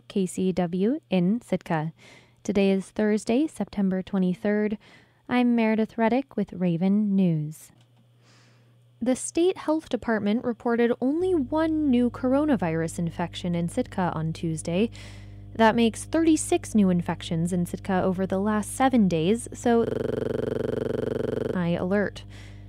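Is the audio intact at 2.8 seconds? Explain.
Yes, the speech at 2.8 seconds plays through intact, with no dropout, click, distortion or other fault at that moment.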